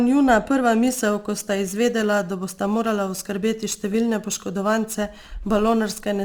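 From 0.84 s, after "njuna prva", crude rate conversion adds a gritty inharmonic fizz to the speech. Samples were repeated without filtering, which fits 44.1 kHz to 48 kHz.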